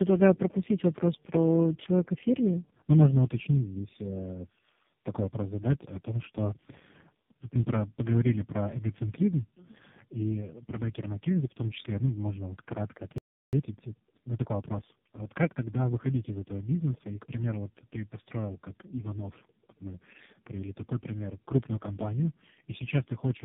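Throughout the recording the speech passed through three speech codecs in a row: GSM full rate, then G.729A, then AMR-NB at 5.9 kbit/s, with G.711 links between them. This is tandem speech coding, where each coder re-encodes the previous one's damage. The result sounds rough, muffled and warbly.

At 13.18 s, right after "ну можно вот кратко", the sound cuts out mid-flow and stays silent for about 0.35 s until 13.53 s. This playback stall was likely caused by the player running out of data or having its thread blocked.

From 13.53 s to 15.83 s the player catches up on its backlog by cutting out small slices and cross-fading across the gaps. This time-compressed catch-up runs the speech about 1.15 times faster at unchanged pitch, before normal pacing returns at "выходить из этого бизнеса".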